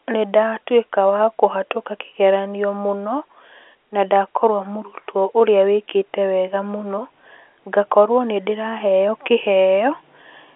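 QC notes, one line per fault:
No faults found; the speech sits in a normal telephone band of about 300 Hz to 3.5 kHz with nothing above 3.9 kHz, as expected of G.711 A-law telephone coding.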